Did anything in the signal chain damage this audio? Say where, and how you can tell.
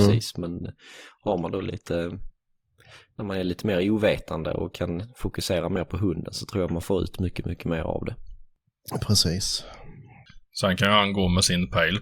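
Yes. For the first 6.0 s the speech sounds dull, with the upper treble missing or replaced by a hissy, synthetic top and heavier codec artefacts. At 6.0 s, just before "hunden så tror jag", the sound brightens and clears abruptly, with no gap or dropout. This is an adaptive stream starting at a low bitrate, a network and codec stage fault. The player began on a cheap rendition, which fits Opus at around 24 kbit/s, then switched to a richer one, consistent with about 64 kbit/s, once the connection had been measured.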